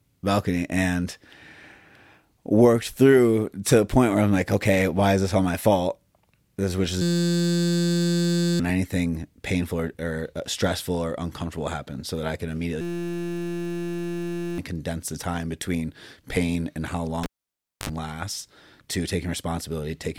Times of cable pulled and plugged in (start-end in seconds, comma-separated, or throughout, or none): 17.23-17.89